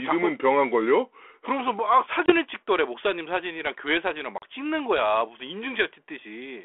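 At 2.26 s and again at 4.38 s, packet loss on an ADPCM call cuts hard-edged silent holes of about 20 ms and 40 ms, roughly one and two packets. Unlike a plain dropout, the speech resumes slightly distorted, because the decoder's predictor and step size have lost track. It settles by 2.34 s and 4.46 s, over a narrow telephone band that fits 32 kbit/s G.726.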